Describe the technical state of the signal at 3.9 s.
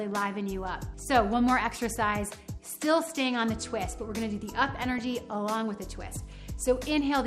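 At 3.9 s the signal carries the same degradation heard across the whole clip: a dull, band-limited top end with a gurgling, granular texture, consistent with heavy MP2 compression. The likely cause is MPEG Layer II coding at too low a rate. With the spectrum split into 32 sub-bands and too few bits to share among them, upper bands drop out and flicker, and the remaining bands are coarsely quantised. The damage is plainly audible and fits a bitrate around 80 kbps.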